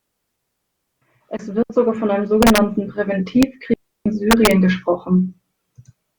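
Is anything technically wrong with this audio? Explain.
Yes, the speech has two kinds of fault.

Digital wireless dropout occurs at 1.63 to 1.70 s, a 72 ms gap just before "sogar von einem", and again at 3.74 to 4.06 s, lasting about 320 ms. In both places the receiver lost too much of the incoming data stream and muted the output behind a very brief fade. The result is a clean hole of near silence, with no hiss, crackle or noise burst at either edge.

Integer overflow occurs at 2.43 to 2.58 s just after "sogar von einem", with peaks about 3 dB past the limit; at 3.43 s, where a peak sits right at the limit; and at 4.31 to 4.51 s, about 2 dB over. Samples that exceeded the largest representable integer wrapped around to the opposite extreme instead of being held at the ceiling. Each wrapped peak jumps across the full range, producing violent cracks far harsher than ordinary clipping.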